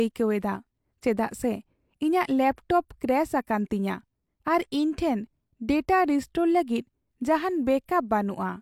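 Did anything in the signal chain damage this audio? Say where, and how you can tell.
No, nothing in the signal chain damaged this speech.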